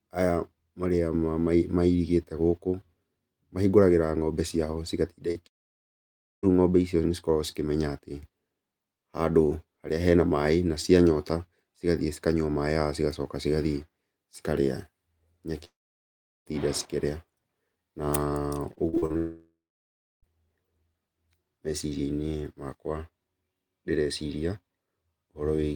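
Right after "mahingũragĩra ng'ombe ciao cigatinda", at 5.31 to 5.37 s, a short concealed packet loss leaves a brief smear. About 40 ms went missing and was patched over.

From 5.47 to 6.45 s, 15.65 to 16.53 s, and 19.17 to 20.25 s, the sound fades to near silence, each time likely a long network dropout. Between about 0.8 and 1.1 s is lost each time.

Between 18.75 and 19.12 s, repeated packet loss makes the speech choppy and robotic, with five gaps of up to 40 ms.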